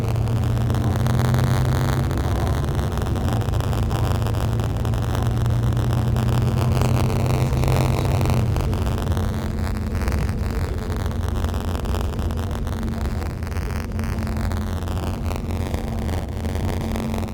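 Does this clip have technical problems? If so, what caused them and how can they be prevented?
Yes, there's buffer tearing throughout: a steady robotic buzz at about 94 Hz, which fits a 512-sample buffer. The writer and the hardware reader have drifted into each other, so a small slice of each period replays audio from roughly 40 ms earlier, with hard joins on both sides. To prevent it, keep the write pointer safely ahead of the read pointer and resynchronise after any underrun.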